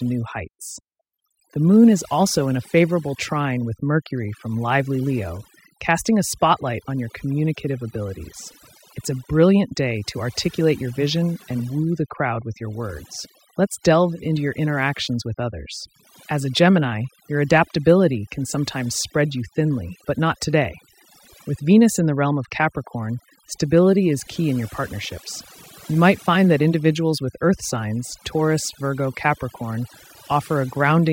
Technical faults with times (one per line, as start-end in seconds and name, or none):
0.00-31.13 overdone noise removal